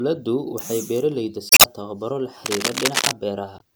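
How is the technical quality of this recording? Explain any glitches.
The recording has two kinds of trouble: a couple of compressed-stream glitches and a burst of scratchy noise.

Damaged data in a compressed stream shows up at 1.48 to 1.66 s and again at 3.57 to 3.62 s. Corrupt bytes throw the decoder off, so it loses sync and skips ahead to the next good frame. You hear a brief glitch in the speech.

Cable scratch noise runs from 2.46 to 3.13 s. It's dense, uneven rustling, roughly as loud as the speech itself. The likely cause is a worn cable or connector being moved, with its contact resistance jumping around and spraying noise into the signal.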